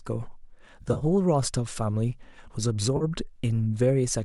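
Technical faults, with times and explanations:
0.81–1.04 s, AAC frame loss with concealment: about 100 ms of audio went missing in short gaps over a 200 ms stretch, the longest roughly 30 ms. The decoder patched each gap by repeating the last good spectrum, so this stretch sounds smeared and noisy rather than silent.
2.97–3.04 s, AAC frame loss with concealment: about 40 ms was lost and filled from the preceding frame. It is heard as a brief phasey, blurred patch. Its length fits the short frames of low-delay AAC, which is likely the codec in use at a moderate bitrate.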